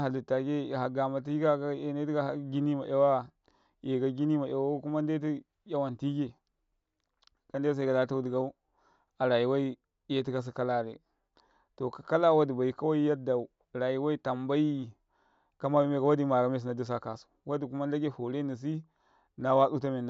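Listening to the speech recording, nothing stood out as a technical problem at any point.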